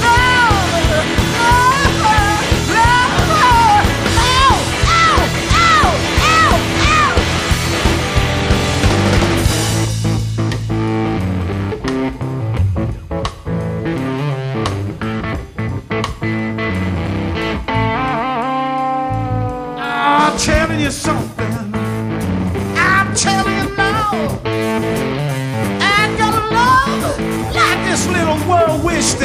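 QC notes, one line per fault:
No fault found, so there are no QC notes to give.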